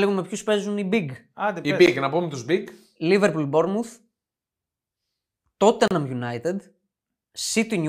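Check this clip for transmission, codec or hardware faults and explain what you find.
Two gaps at a join of encoded pieces break the speech. At 1.86 s a 14 ms silence falls just before "να πούμε του", and at 5.88 to 5.91 s a 32 ms silence opens, 4.0 s later. Each piece was encoded separately and joined untrimmed, so encoder start-up delay and final-frame padding remain as silences with smeared edges. Unlike packet-loss dropouts, no sound is lost; the speech resumes exactly where it stopped.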